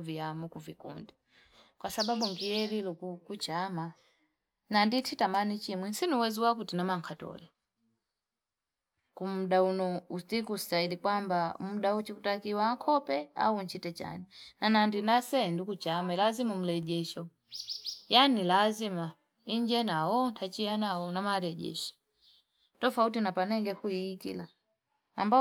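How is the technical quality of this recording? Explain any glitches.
No technical faults can be heard in this recording.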